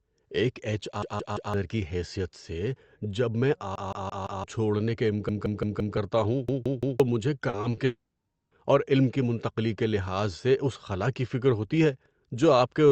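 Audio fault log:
1.02–1.54 s, 3.76–4.44 s, 5.29–5.97 s, 6.49–7.00 s, repeated buffer: the same 171 ms chunk plays over and over with a hard edit at each restart, which fits an 8192-sample buffer. It repeats 3, 4, 4 and 3 extra times, so each event stutters like a brief loop. The third comes right after "چھوڑنے کے" and ends at "کرتا ہوں", and the fourth follows that same phrase. Each one swallows the real audio underneath, roughly half a second to three quarters of a second.
7.49–7.79 s, repeated packet loss (robotic sound): in this 0.3 s stretch there are four small holes, the longest 40 ms, about 100 ms missing in total. Each one gets patched by stretching out the last bit of sound, and the next hole arrives before things settle. About a third of the stretch is filler, so the speech turns choppy with pieces missing.
7.85–8.53 s, long network dropout: nothing usable came through for 0.68 s, most likely because the network stopped delivering packets for that long. 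The receiver keeps extending the last sound, which you hear as a fading buzz or hiss. The final 80 ms or so drop to near-silence. The speech then picks up at "اور علم کی منتقلی", and the lost part is simply gone. The Opus call path caps the band at 8 kHz throughout.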